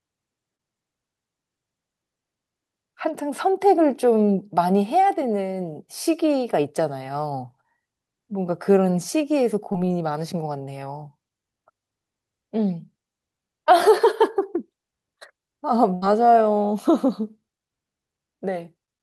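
At 0.55–0.61, 9.73–9.76 and 13.64–13.68 s, short concealed packet loss appears as brief smears where the receiver extended the preceding sound over 20–40 ms of missing audio. At 15.94–16.04 s a burst of packet loss drops about 80 ms, and the concealment holds then fades the last sound before the audio resumes further on.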